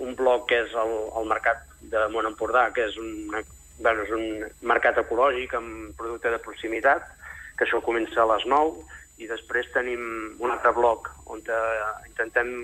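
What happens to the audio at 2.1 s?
Nothing goes wrong at 2.1 s; the audio plays through that moment intact, with no dropout, glitch or distortion.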